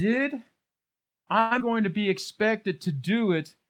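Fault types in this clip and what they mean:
Call audio freeze: From 1.39 to 1.53 s the sound stalls and the last fragment is stretched into a fading buzz or hiss for about 115 ms, likely from a jitter buffer running empty. On a spectrogram it appears as smeared, flat harmonics, with speech resuming intact.
Skip ahead: At about 1.59 to 1.62 s, speech jumps forward, dropping roughly 70 ms while later audio was already queued. Only a tiny 12 ms joint bridges the cut, so the waveform shows an abrupt splice.
Jitter buffer slow-down: From 1.71 to 2.53 s, repeated pitch periods add 67 ms, so speech runs at 93% speed without any pitch change. Sounds are slightly drawn out, and the spectrogram shows elongated voiced segments with repeating, evenly spaced cycles in the waveform.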